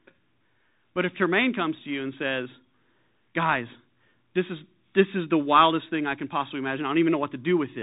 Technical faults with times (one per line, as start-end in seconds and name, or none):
0.00-7.82 Bluetooth CVSD headset codec